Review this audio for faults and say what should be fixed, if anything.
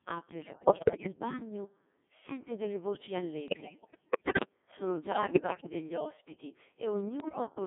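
The whole clip runs through a Codec 2 vocoder, apparently the 1.6 kbit/s mode, heavily damaged, band-limited to 200 Hz to 3.5 kHz. The speech is rebuilt from pitch and envelope as sine waves, hence the buzzy, robotic sound. A higher-rate codec would avoid this.

Bit errors on digital voice radio hit from 0.41 to 1.12 s, 3.48 to 4.49 s, 5.12 to 5.67 s and 7.20 to 7.50 s. Roughly one bit in ten or worse gets flipped, scrambling frame parameters into warbles and pitch jumps. Better signal margin or stronger error correction would prevent it.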